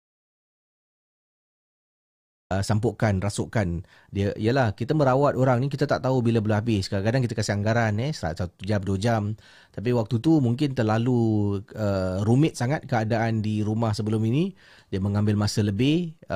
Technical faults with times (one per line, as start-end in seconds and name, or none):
0.00-2.50 audio dropout to silence